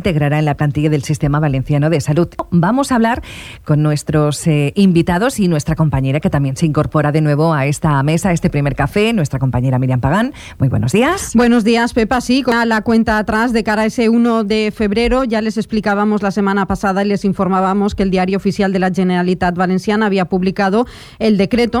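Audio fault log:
2.39 s and 12.52 s, damaged data in a compressed stream: two brief blips where corrupted bytes in the encoded stream leave the decoder unable to parse a frame correctly, so it loses sync and outputs a short glitch before it finds the next valid frame header.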